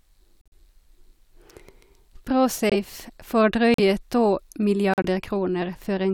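Damaged compressed frames were rejected by the decoder and replaced with silence: corrupt frame muted. The speech drops abruptly into dead gaps at 0.41–0.53 s, 2.70–2.75 s, 3.74–3.80 s and 4.94–5.05 s, with timing intact.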